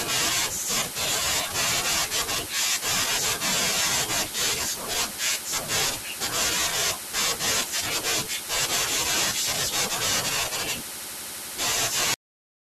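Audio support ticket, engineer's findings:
Cut-off end at 12.14 s. Speech stops mid-sound, straight to digital silence, no decay or room tail. Probable component: capture/playback buffer handling at stop. Final buffers never written or flushed, so the remaining 0.6 s is empty rather than the natural ending.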